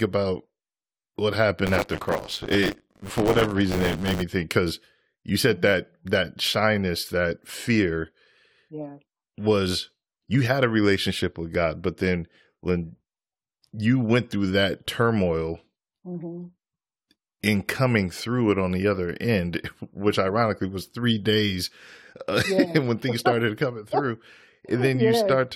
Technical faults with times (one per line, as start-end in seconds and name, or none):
1.66-4.23 buffer tearing